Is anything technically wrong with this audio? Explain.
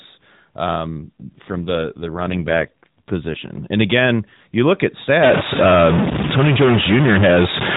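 Yes, two faults stand out in this speech.

From 0.86 to 3.51 s there is an AMR rate drop: the link forces the codec from 12.2 kbps down to 5.9 kbps, so fewer bits describe each frame. The speech turns rougher and more synthetic, but the band and continuity stay intact, with no gap or muffling. That distinguishes it from packet loss or a bandwidth cut.

From 5.23 s, just after "again you look at", to the end of the clip, a stuck bit is heard as distortion, and the pauses fill with noise instead of falling silent. The likely cause is one data bit held at a fixed value. Unlike clipping, the damage doesn't depend on loudness, because it reaches quiet passages too.

Beneath both, the narrowband AMR-NB sound at 12.2 kbps carries nothing above 4 kHz.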